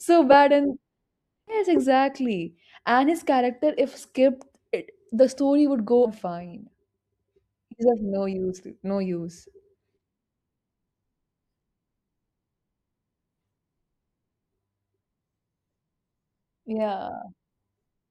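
Right near the start, at 0.31 to 0.34 s, the speech lurches forward: compressed frames skipped. Chunks of the coded stream never reach playback, so the audio jumps ahead. Here it loses roughly a tenth of a second, in steps that suggest 20 ms frames. It happens again at 1.47 to 1.55 s and at 6.05 to 6.09 s, about a fifth of a second each time.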